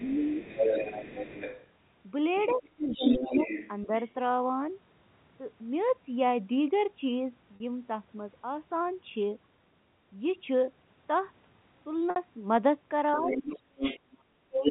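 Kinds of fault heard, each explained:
Speech suppressed in double talk: while both sides talk, the voice dips in short pieces by up to about 35 dB, likely from the echo canceller turning everything down.
Other side's voice leaking through: a second voice runs under the talker, at times about as loud, likely loudspeaker echo the canceller failed to remove.
Packet loss with pitch repetition: gaps of 40 and 60 ms are filled by repeating the last pitch period, heard as a brief held, buzzy tone.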